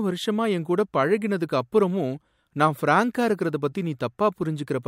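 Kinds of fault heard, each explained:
No faults turn up anywhere in this speech recording, so there's nothing here to list or explain.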